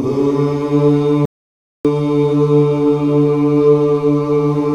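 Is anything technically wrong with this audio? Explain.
Yes. An audio dropout to silence runs from 1.25 to 1.85 s, about 0.59 s long. The input likely disconnected or muted while writing continued, so the sound cuts off mid-flow into silence with no room tone, then resumes abruptly. Whatever occurred there is lost.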